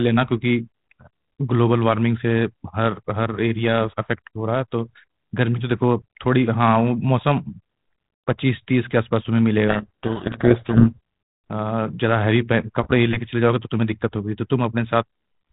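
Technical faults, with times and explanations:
9.68–10.96 s: codec payload misread. The 32 kbit/s G.726 code words are unpacked in the wrong bit order, so the decoder tracks false differences and the speech is buried in harsh distortion. The spectrogram shows dense grit filling everything below 4 kHz, and the waveform turns ragged.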